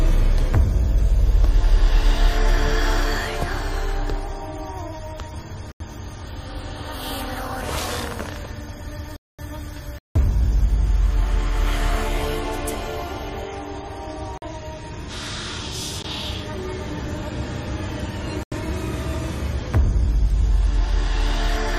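Sudden holes at 5.72–5.80 s, 9.16–9.39 s, 9.98–10.16 s, 14.38–14.42 s, 16.02 s and 18.43–18.52 s. Each is a block of digital silence, 19 to 223 ms long, where samples were zeroed, likely because the output buffer wasn't filled in time. The 85 ms gaps fit 4096-sample blocks.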